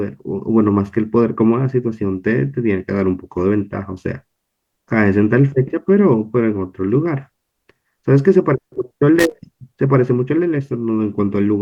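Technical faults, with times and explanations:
9.19 to 9.32 s, loose connector crackle: a worn or dirty contact somewhere in the cable or jack path loses and regains its connection over and over as it shifts. Each break chops the speech signal off and each reconnection snaps it back, and any DC sitting on the line turns those transitions into pops, so for roughly 130 ms the audio breaks into an irregular, scratchy burst of crackle rather than a single clean click.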